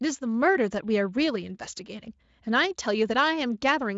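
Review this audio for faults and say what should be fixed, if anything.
No faults; nothing to fix.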